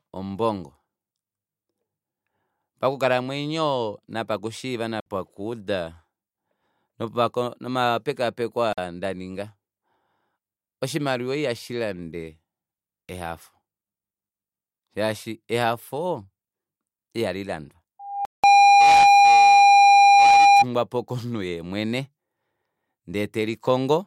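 At 5.00 s, 8.73 s and 18.25 s a block of digital silence replaced the speech. The gaps last about 60 ms, 46 ms and 186 ms; the last two fit blocks of 2048 and 8192 samples. The sound cuts out and back with no fade. The first two are heard as short holes and the third as a longer dropout.

From 17.99 s a microphone picked up the loudspeaker it was feeding, and at 804 Hz the loop gain went above one. That tone built on itself over about half a second into a loudspeaker feedback squeal. The steady, piercing whistle peaks roughly 15 dB above the speech and persists until 20.65 s, straddling the 18.25 s dropout.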